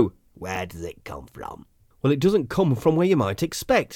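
At 0.55 s, just before "does it come from", a corrupt frame is decoded. Flipped bits in the compressed data went unnoticed, and the decoder misplaced energy across frequencies. It sounds like a brief chirp, squeak, blip or burst of noise peaking around -15 dBFS, fitting a few damaged frames.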